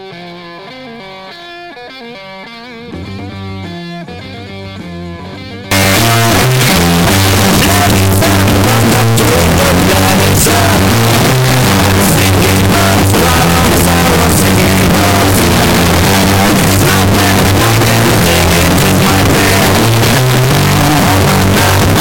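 From 5.71 s to the end, the sound turns into very loud, harsh distortion, with quiet passages as loud as the rest. This is likely signed and unsigned mixed up: flipping the top bit of what fits 16-bit samples makes every zero crossing jump across the full range.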